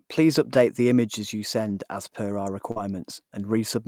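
At 1.69 to 1.71 s, a 20 ms stretch of speech is a lost packet rebuilt from error correction. The packet never arrived, but the next one carried a low-bitrate copy, which the decoder played in its place. There is no gap, just a brief rougher, noisier grain. On a spectrogram the harmonics in that slice look smeared and speckled with noise, while the waveform envelope stays continuous.

From 2.71 to 2.78 s comes a short concealed packet loss. About 40 ms of audio went missing, and the receiver filled roughly 43 ms by extending the preceding sound before blending back into real signal. It is heard as a quick smear or wobble. On a spectrogram the harmonics run on flat and unnaturally steady, then fade out. The waveform shows a repetitive, decaying section in place of the natural shape.

Overlapping the end of that gap, at 2.76 to 2.78 s, a second lost packet is rebuilt from error correction. 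For the final 20 ms the decoder switches from guessing to the coarse backup copy, so the handover into real audio is gritty rather than clean. A spectrogram shows the hazy, lower-detail texture just before full detail returns.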